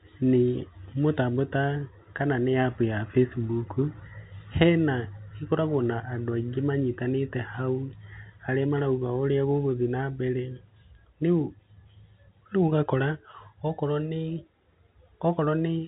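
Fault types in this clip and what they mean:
The speech carries telephone-band G.711 coding, which cuts everything above about 3.9 kHz and leaves at most a faint codec trace, and the signal shows no faults.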